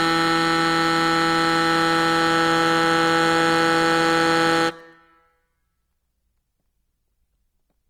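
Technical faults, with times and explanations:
throughout Opus compression: likely a music-mode Opus encode fitting about 24 kbps, filling starved bands with folded or noise content, so tones turn grainy and rough.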